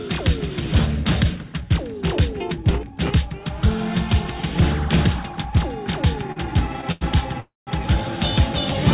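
At 6.32 to 6.39 s and again at 6.92 to 7.04 s there is a short stall from a late packet. Each time a packet missed its slot, the jitter buffer emptied, and the receiver stretched the last sound, by 40 ms and then 95 ms, before resuming at the same point. Nothing is lost. What you hear is a sound held slightly too long with a faint buzzy smear. Unlike a freeze, it never drops to silence.

From 7.40 to 7.70 s comes a call audio freeze, likely from packets held up in transit. The buffer ran dry for about 270 ms. The receiver extended the last sound as a buzz that fades, then left roughly 170 ms of silence before the audio picked up where it stopped, now running later. That audible fade into a silent gap is what separates it from the brief stretched stalls just before. The band-limited sound, with nothing above 4 kHz, fits the G.711 A-law call path.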